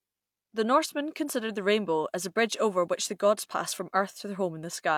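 No technical faults are audible.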